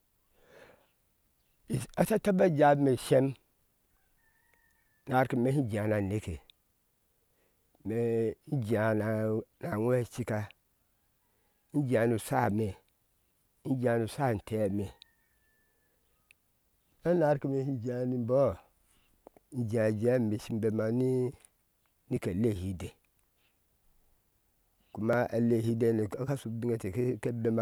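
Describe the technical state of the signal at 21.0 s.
A regular click recurs every 2.97 s from 1.36 s to 25.13 s: clock drift buffer slips, likely from unsynchronised device clocks dropping or repeating around 150 samples.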